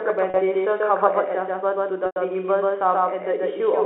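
From the start, a doubled audio track runs under the whole clip. A second full-band copy trails the original by roughly 150 ms. It is about as loud as the first. It has no decay and no room colour, so it sounds like a flat slapback echo. The likely cause is a second, slower capture path or an edit that left two copies out of step.

At 0.30 s comes packet loss with pitch repetition. About 40 ms drops out until 0.34 s, which fits two 20 ms packets. The receiver loops the last pitch period to cover the gap, so the sound briefly holds on a buzzy tone. At 2.06 s a longer gap of 100 ms follows, ending at 2.16 s. That fits five packets. Here the repeated cycle fades toward silence, and the speech returns through a short cross-fade. The narrow telephone band of the line carries both events.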